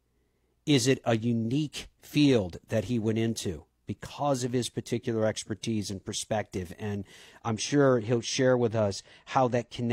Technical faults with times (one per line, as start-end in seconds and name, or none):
7.50-9.92 channel delay (comb filtering)